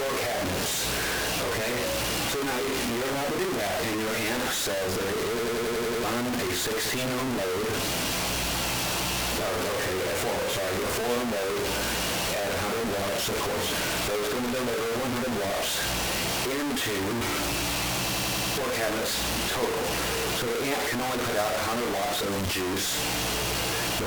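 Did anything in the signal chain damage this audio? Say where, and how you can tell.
Yes. From start to finish the audio is coarse and grainy, with distortion that tracks the sound itself. The error sits only about 5 dB below the signal, and quiet passages break up into harsh stepping. This is likely a sample-format conversion stage that truncated the signal to very few bits without dither, with the sound pointing to something like 3-bit resolution. Because no dither was added, the rounding error stays locked to the waveform.

A system hang loop happens twice, from 5.39 to 6.04 s and from 18.11 to 18.58 s. In each case a single 92.88 ms slice repeats exactly, 7 times and then 5 times, and the result is a machine-gun stutter at about 10.8 Hz. That points to the driver or buffer stage. The host stalled while the hardware kept replaying the same ring buffer, which fits a 4096-sample buffer, and about 0.7 s and 0.5 s of real audio were lost.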